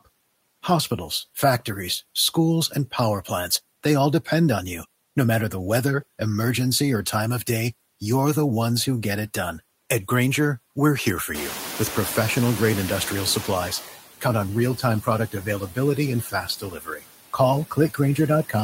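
Noise suppressor artifacts run through the whole clip. The suppressor pulls down the bands it judges to be steady noise by about 16 dB, frame by frame. The background dips between phrases and swells back under the speech.

Noise suppressor catching up, from 11.34 to 13.91 s: the room noise jumps by about 19 dB at around 11.5 s, settling roughly 13 dB below the speech. The suppressor's noise estimate trails that change. For about 2.57 s the louder background passes with only about 10 dB of reduction, then sinks as the estimate adapts.

Speech cut by the noise suppressor, from 15.32 to 15.77 s and again from 16.22 to 17.04 s: the suppressor mistakes parts of the speech for noise and turns them down with the background, by as much as about 13 dB. The first stretch loses around a tenth of a second of soft sound. The second loses around half a second, and those portions come across swallowed and faint.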